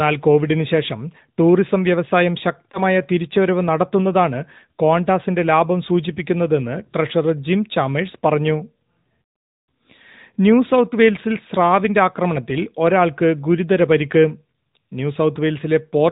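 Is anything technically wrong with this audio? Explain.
Yes. Two problems are audible.

Throughout, the speech has AMR narrowband mobile codec damage. Nothing above 4 kHz survives, and the voice sounds plainly buzzy and synthetic because it is rebuilt from a vocal tract model driven by sparse pulses. That fits a mid-rate mode around 10.2 kbps. Ordinary low-pass filtering would sound dull but still natural, without this coded buzz.

From 2.72 to 2.80 s, there is a lost AMR speech frame. One 20 ms frame failed, so the decoder repeated the previous pitch and vocal tract settings at reduced gain. The result is a brief dip or warble rather than a hard click or the silent hole of a plain dropout.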